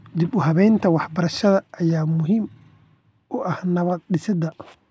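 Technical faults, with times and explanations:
Nothing stood out on listening to this speech recording.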